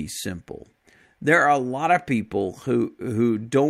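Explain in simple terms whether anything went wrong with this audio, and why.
Listening to this speech recording, nothing stood out as having gone wrong at any point.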